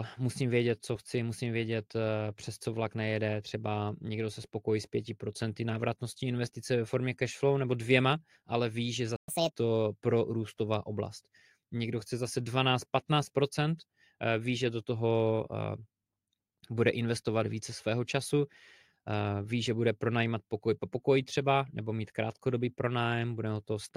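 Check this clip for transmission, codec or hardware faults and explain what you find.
There are two linked playback faults in this speech, right after "dvěma ale ví že".

From 9.16 to 9.28 s there's a playback stall. The sound cuts out for 120 ms, likely because the player ran dry or its thread got blocked.

From 9.28 to 9.52 s comes catch-up at higher speed. The player rushes through its backlog at 1.5x, so pitch jumps up by roughly seven semitones, then settles before "pro růstová oblast".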